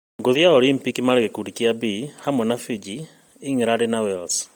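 Throughout the speech, heavy Bluetooth LC3 compression, likely, leaves a breathy, grainy noise-filled top end. Unlike plain band-limiting, content reaches about 20.1 kHz, fitting 32 kbps with 10 ms frames.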